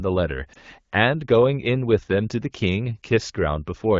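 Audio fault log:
0.53–0.57 s, lost AMR speech frame: a single 20 ms frame failed its checksum, so the decoder filled it by repeating the previous frame's pitch and vocal tract settings at reduced gain. The result is a brief dip or warble rather than a hard silent gap or click, which separates it from a plain dropout. The clear wideband speech around it points to AMR-WB at about 12.65 kbit/s.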